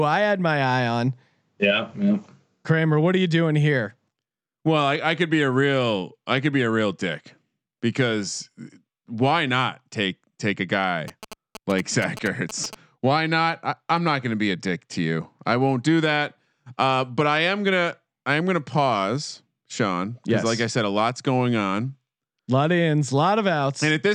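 Right after "not take take a", from about 11.08 to 12.75 s, there's a stretch of GSM signalling bursts. A 2G phone close by was sending short groups of radio bursts, the kind it fires off before a call or text comes in, and the audio circuitry rectified them into sound. You hear a galloping dit-dit-dit of short buzzes at 217 Hz, sitting roughly 15 dB below the speech.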